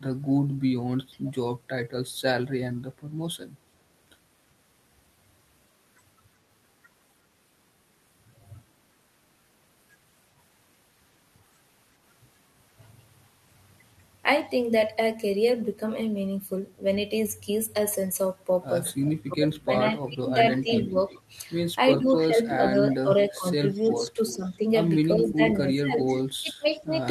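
At 1.26 s and again at 19.05 s there's a faint echo leak, a delayed copy of the speech coming back about 0.37 s late, roughly 25 and then 20 dB down, likely from a far-end loudspeaker that the echo canceller didn't fully cancel. From 19.12 to 20.96 s the speech gets pushed down by as much as 20 dB for around a second in total. That's speech suppressed in double talk, likely the canceller ducking everything while both sides overlap. The echo returns from 20.78 to 22.13 s, stronger at about 15 dB below the speech. From 21.97 to 26.95 s the suppression hits again, with dips of up to about 15 dB over roughly two seconds. Meanwhile the loudest echo leak runs from 23.72 to 26.79 s, only about 10 dB under the speech and still trailing by about 0.37 s.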